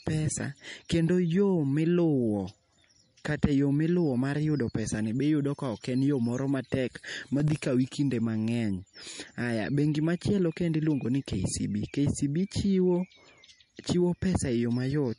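A speech recording with two faults. Throughout, the sound is watery and swirly, and s sounds carry metallic chirps. Nothing is heard above 10.6 kHz, where the treble is cut off sharply. This is most likely MP3 compression at a low rate, something near 40 kbps. At that rate the encoder runs short of bits, so it drops the top band and zeroes weak frequency lines. Those lines flicker on and off between frames, which causes the swirl. From 7.4 to 7.61 s there is a short burst of gritty crackle. This is processor overload crackle. The processor missed several audio deadlines in a row, around five, and each missed block played as a hard-edged gap of silence. The gaps are very short, which fits buffers of roughly 1.5 ms. Once the load eased, the crackle stopped.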